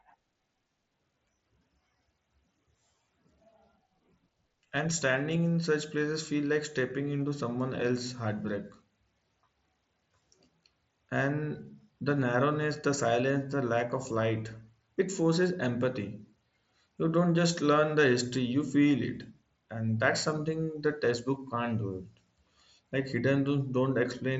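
Nothing stood out on listening to this speech recording, carried over a wideband Bluetooth headset link.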